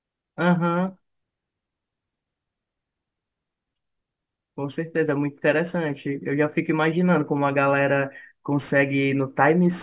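Speech, with aliasing throughout: a sample-rate reduction, which fits a drop to 8 kHz without a low-pass filter first, folds energy above 4 kHz back down, leaving sibilants gritty and metallic.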